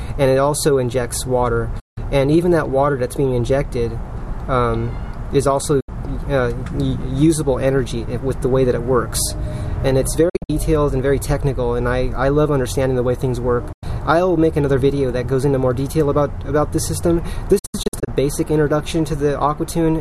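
Digital broadcast dropouts occur five times. At 1.79 s the sound fades out over 8 ms and is silent for 168 ms. Shorter holes follow at 5.80 s (72 ms) and 13.72 s (96 ms). At 10.29 s and 17.59 s the silence is broken into several short gaps. The longest of these gaps run 48 ms and 72 ms. The receiver muted when frames failed, and that audio is lost. The lengths come in 24 ms steps, which fits 24 ms frames.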